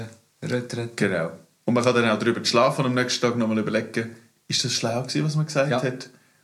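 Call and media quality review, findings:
No faults found on listening.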